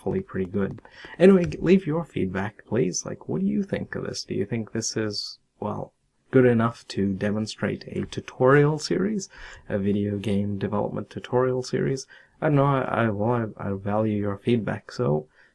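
No technical faults can be heard anywhere in the clip. Nothing in the sound points to a problem in how it was captured, processed or played back.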